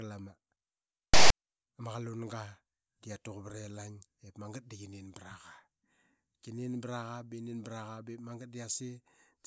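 At 1.14 s there's a short burst of file tags played as audio, running to 1.30 s. A block of text metadata got read as sample data, so you hear a loud, raspy blast of static lopsided to one side, with hard on and off edges.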